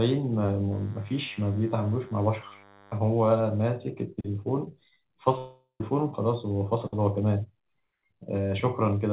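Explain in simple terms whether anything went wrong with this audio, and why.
From 0.72 to 2.98 s there's a faint, thin buzz from DECT cordless phone interference: a nearby handset's radio bursts, 100 times a second, leak into the audio circuit.

At 5.38 s about 0.42 s of sound goes missing, likely a long network dropout. The gap gets patched by stretching out the last sound as it fades, then a brief silence before the sound resumes at 5.81 s.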